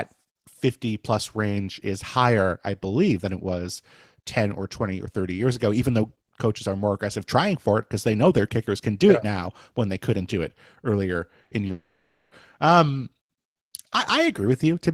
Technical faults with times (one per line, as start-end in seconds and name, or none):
11.43-11.71 short concealed packet loss
11.71-12.33 long network dropout